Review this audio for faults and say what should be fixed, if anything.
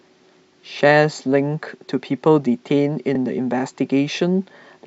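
A block of compressed audio was delivered to the decoder twice, a case of repeated frames. At 3.15 s to 3.18 s, a 32 ms stretch of the speech plays once more immediately after itself, which fits a single 32 ms frame being duplicated. The result is a brief stutter where the same sliver of sound restarts, and the clip runs 32 ms longer than the original. To prevent it, track frame sequence numbers or timestamps and drop any frame already written or decoded.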